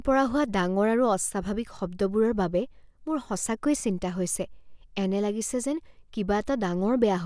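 No technical faults can be heard anywhere in the recording. The speech runs without any break or disturbance in the sound.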